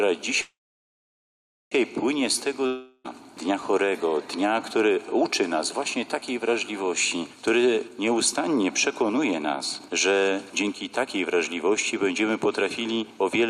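Gain pumping runs throughout: the background swells in gaps and ducks by around 5 dB under loud sounds, likely from excessive gain driving a fast limiter.

A call audio freeze at 0.41 to 1.73 s holds the sound for about 1.3 s, mostly silent, then resumes with nothing lost; likely delayed packets emptied the jitter buffer.

A long network dropout at 2.66 to 3.06 s fades the last sound briefly into silence, and about 0.38 s of audio is missing, likely from packets that never arrived.

A jitter buffer speed-up from 7.82 to 13.42 s plays the audio at 110% speed with unchanged pitch, trimming roughly half a second in short pitch-period cuts to shrink the delay.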